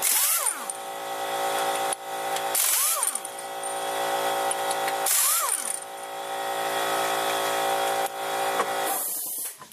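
No technical faults can be heard anywhere in the recording; the signal stays steady and intact throughout.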